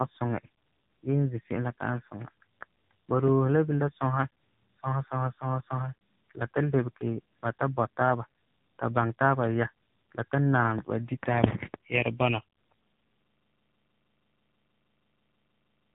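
Tandem speech coding affects the whole clip. The speech passed through two speech coders in a row, with a decode and re-encode at each link. The second coder had to work on audio the first had already damaged, so the losses stacked. Nothing remains above 3.8 kHz. The result sounds muffled, rough and warbly. That texture fits a low-rate AMR-NB stage, near 6.7 kbit/s, following an earlier ADPCM coder.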